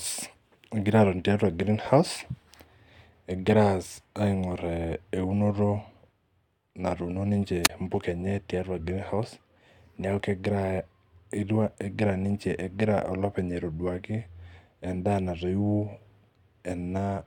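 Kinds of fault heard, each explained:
Wireless microphone squelch dropout: the analogue FM radio link faded and the receiver's squelch muted the output, so between 7.63 and 7.70 s a brief rise of hiss gives way to a 22 ms hole of near silence before the speech returns with "impuka enye tiatua greenhouse".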